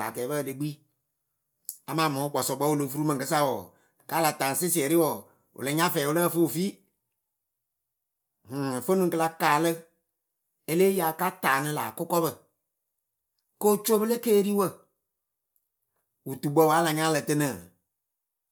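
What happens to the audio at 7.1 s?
Nothing goes wrong at 7.1 s; the speech carries on intact through that moment.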